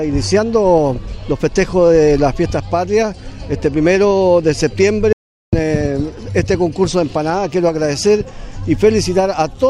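At 5.13 s the sound cuts to silence for 0.4 s, until 5.53 s, with no room tone: an audio dropout to silence, likely from lost input.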